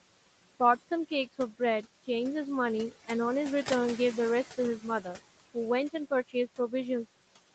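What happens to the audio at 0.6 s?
At 0.6 s, noise suppressor artifacts run through the speech, as they do throughout. Bands judged as steady noise are pushed down about 18 dB, so the noise sinks between the words and rises under them.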